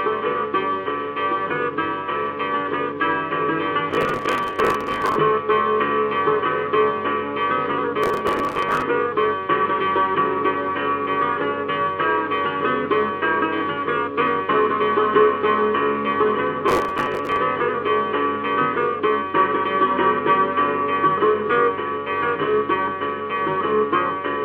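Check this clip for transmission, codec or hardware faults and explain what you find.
Three bursts of processor overload crackle, at 3.91–5.16 s, 8.04–8.82 s and 16.68–17.37 s. The machine kept missing its buffer deadlines back to back, replaying stale chunks with hard edges, roughly 10 ms each by the grain, so you get gritty tearing that clears once the load drops.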